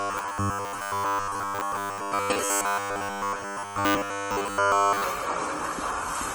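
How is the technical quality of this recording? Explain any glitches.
The technical quality is poor, with two faults stacked on top of each other.

From 0.01 s to 5.04 s, the sound turns into a rigid, metallic buzz pitched at 100 Hz, the robotic sound from repeated short buffers. Audio likely arrived too seldom, so playback kept looping the last 10 ms chunk. That loop imposes the fixed pitch, and most of the real material in that stretch is skipped.

Throughout the clip, the audio sounds swirly, hollow and smeared, with blurred attacks. This is generation loss, likely from re-encoding with AAC-LC at 64 kbit/s several times over. Each pass quantises again on a shifted frame grid, so the artefacts pile up.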